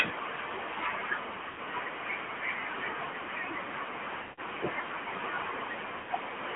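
This is speech squeezed through the AMR narrowband mobile codec: everything lives between 200 Hz and 3.4 kHz, and the voice carries that buzzy, plainly synthetic coding damage. That level of roughness fits the 10.2 kbps mode. There are also lost AMR speech frames at 1.48–1.60 s, 4.22–4.41 s and 5.98–6.10 s. The decoder stretches the last good pitch and tract settings while fading them, so each gap smears and dies out. The 100 ms gaps fit runs of five 20 ms frames, and the 160 ms one fits eight.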